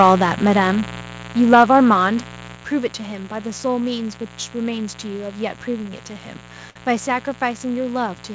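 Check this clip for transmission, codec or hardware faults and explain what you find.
Four kinds of fault show up: a constant mains buzz, two bursts of microphone overload, three sudden drops in microphone level, and one short stall from a late packet.

Mains buzz runs through the whole recording as a steady, raspy drone roughly 15 dB below the speech. It is built on 60 Hz, with a dense ladder of harmonics that gives it its gritty edge. Sharp switching spikes from a dimmer, rectifier or poorly shielded cable enter the signal twice per mains cycle, and those spikes spread energy far up the spectrum. The call path, whose content stops at 8 kHz as a G.722-style wideband codec would, carries the buzz through with the voice.

Microphone overload is heard from 0.00 to 0.12 s and again from 1.52 to 1.80 s as a harsh, crackly fringe on the loudest syllables. The second burst is the rougher of the two, with peaks pushing about 7 dB past the converter's limit against about 3 dB in the first. 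The likely cause is an input gain set too high, so the loudest peaks hit the converter's ceiling and have their tops sliced off, and the flattened waveform adds brittle distortion.

Microphone volume stepped down is heard at 1.02 s, 1.55 s and 2.55 s as abrupt drops in loudness that pull the speech and the background down together, by about 3 dB, 2 dB and 6 dB respectively. The second drop lands just as the overload peak is under way. This pattern likely comes from the call software reacting to the overly hot, clipping input by cutting the device's input volume in single steps rather than fading it.

A short stall from a late packet appears between 6.70 and 6.78 s as a sound held unnaturally long. A packet failed to arrive on time and the jitter buffer ran dry. The receiver stretched the last audio it had for about 56 ms until the data turned up, then resumed exactly where it left off. Nothing is lost, but the timing afterwards sits 56 ms later.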